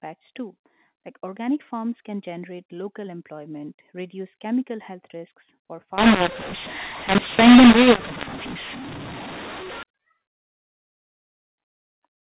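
From 5.98 s to 9.83 s the speech suddenly turns harsh and gritty. That's a classic mu-law and A-law mix-up: the sound points to samples encoded with mu-law being decoded as A-law. The two logarithmic curves don't line up, so levels get scrambled. Some come out too loud and some too quiet, and the near-silent samples get pushed way up, so the gaps between words fill with noise. Outside that stretch the audio has the usual telephone-band sound of G.711 telephone coding, with nothing above 4 kHz.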